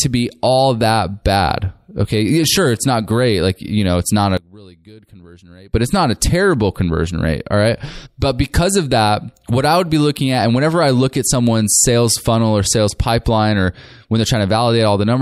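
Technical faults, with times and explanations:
4.37 to 5.74 s, one channel inverted: right after "know it's not a", the voice suddenly drops by about 25 dB, then comes back at "it's not a terrible". What you're hearing is likely one stereo side flipped in polarity, so when the two sides get summed to mono, the centred voice cancels itself out. Only the small difference between the channels survives, which is why it sounds like a faint ghost of the speech.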